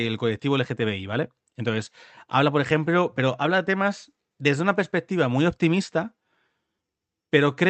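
No technical faults turn up anywhere in this speech recording. It has passed through a call codec, and the top end stops at about 8 kHz with the usual coding texture that fits Opus at around 32 kbps.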